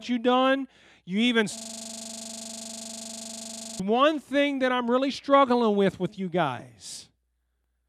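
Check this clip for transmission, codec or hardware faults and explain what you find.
One hardware fault is present: a system hang loop in this speech clip from 1.57 to 3.80 s, ending just before "one thing that I'm". The computer or audio driver stalled while the sound hardware kept replaying its ring buffer, so a single 40 ms slice repeats exactly, over fifty times, until the system recovers. At a 25 Hz repeat rate the frozen fragment becomes a rapid, rattling stutter lasting just over two seconds.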